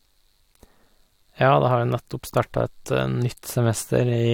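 Nothing in this bit of speech stands out as a technical fault; it just runs along without any trouble worth pointing to.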